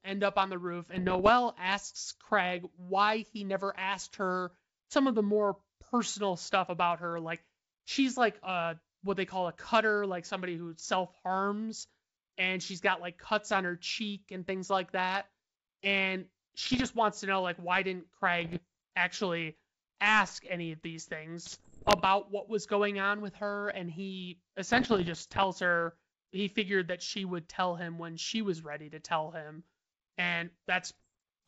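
At 0.95 to 1.31 s, 16.61 to 16.86 s, 18.41 to 18.60 s, 21.46 to 22.06 s, 24.73 to 25.45 s and 30.86 to 31.08 s, the speech breaks into pops and rough, gritty bursts with brief jumps in level. These are bit errors on an ADPCM link, at an error rate of around one percent, heaviest at 21.5 s. Each flipped bit throws off the decoder's step size and predictor, so the damage rings on briefly. Packet loss would instead leave gaps or repeated sound. Outside these spans, the wideband sound fits a 64 kbit/s G.722 link.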